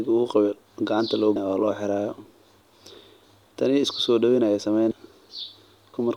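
Audible joins at 1.36, 4.91 and 5.94 s, where the speech jumps forward by about a fifth of a second, a little less at the last. These are compressed frames skipped: several 32 ms frames went missing or were rejected.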